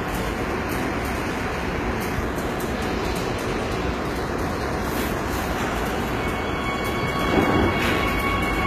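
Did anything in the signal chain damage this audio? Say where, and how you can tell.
Yes, at the codec stage, and it runs the whole way through. The treble sounds grainy, metallic and detached from the body of the sound, with nothing above 14.9 kHz. That's likely HE-AAC compression rebuilding the top end from copied lower bands, which fits a bitrate around 20 kbps.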